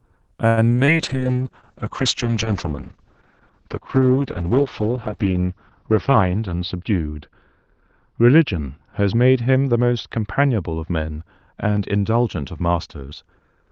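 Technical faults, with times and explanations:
0.47–0.89 s, repeated packet loss (robotic sound): four separate dropouts in under half a second, the longest 97 ms. About 153 ms is filled by stretching the preceding sound and 60 ms is simply missing, so over a third of this span is patched over and it sounds choppy.
1.0–13.7 s, call bitrate drop: the sound turns rough and watery, and the upper band collapses from 12 kHz to 6 kHz, giving a muffled tone. This points to the encoder's rate falling from about 32 kbps to about 7 kbps, with the worst stretch lasting about 4.9 s.
5.91–6.93 s, jitter buffer speed-up: delivery runs at 109% speed with unchanged pitch. The receiver cuts repeated pitch-period slices, about a tenth of a second in total, to drain excess buffered audio, and the sound comes across as briefly hurried.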